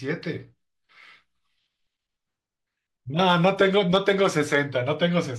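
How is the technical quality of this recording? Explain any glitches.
The recording has one fault. Hard clipping from 3.21 to 4.58 s: speech peaks overdriven by about 4 dB are cut flat, adding high harmonics heard as crackly, gritty distortion.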